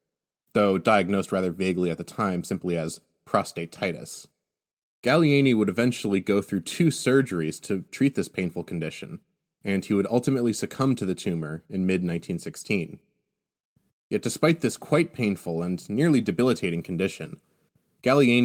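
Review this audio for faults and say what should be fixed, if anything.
Nothing stood out on listening to this speech recording, so there is nothing here that needs fixing.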